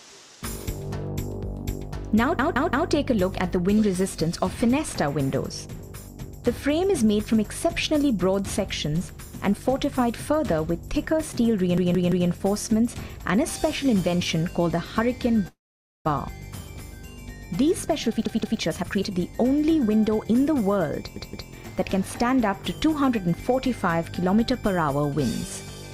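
At 2.39 s a repeated buffer occurs: new audio missed its deadline, so the device replayed its last 0.17 s block, which fits an 8192-sample buffer. That piece sounds four times in a row, with a hard join at each repeat, as a stutter lasting until 2.90 s. The same repeated buffer returns from 11.78 to 12.29 s, again heard four times.

From 15.48 to 16.07 s a call audio freeze is heard. Packets were likely held up in transit until the jitter buffer ran dry. The last sound is stretched for about 0.57 s, mostly silence lasting about 0.49 s, before the audio resumes exactly where it stopped.

From 17.63 to 20.69 s a jitter buffer speed-up trims roughly half a second of surplus buffered audio by cutting many short pitch-period pieces. The sound runs at 121% speed with unchanged pitch and comes across as hurried. Within that stretch, at 18.26 s, another repeated buffer plays its block three times, ending at 18.60 s. 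A final repeated buffer follows from 21.16 to 21.50 s, also heard three times.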